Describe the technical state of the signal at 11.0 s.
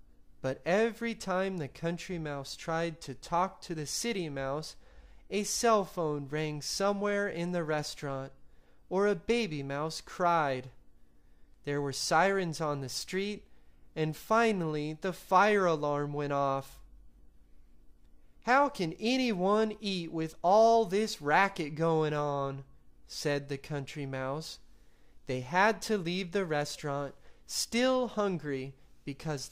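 Nothing at 11.0 s points to a technical fault: the signal is intact at that moment, with no dropout, distortion or other disturbance to be heard.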